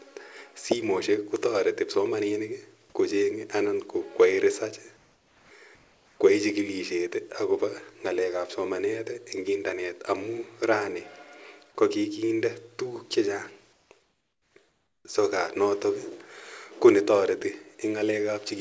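Comfort noise in place of the background appears in the speech pauses at 4.97–5.51, 5.75–6.20, 13.73–13.91, 14.03–14.54 and 14.69–15.05 s. The real room tone, about 35 to 49 dB below the loudest speech, gives way to a flat, featureless hiss about 3 to 5 dB quieter. This is likely discontinuous transmission, where the sender goes silent in the pauses and the receiver synthesises shaped noise. Across the speech, nothing is heard above 8 kHz, which fits G.722 at 64 kbps.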